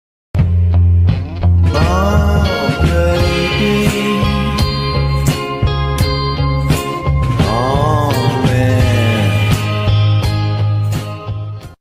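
Nothing in this one trips the ear: no faults turn up anywhere along the way, so there's nothing to point to here.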